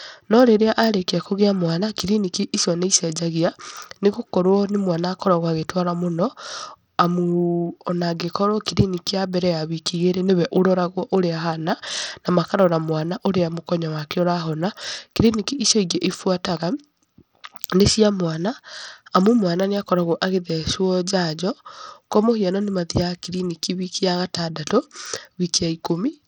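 Bluetooth SBC compression, running throughout the speech, is the likely cause of the plainly audible damage. Too few bits reach the upper sub-bands, so the treble flickers and drops away while a gritty, aliased roughness rides on the voice, which fits a starved bitrate near 80 kbps.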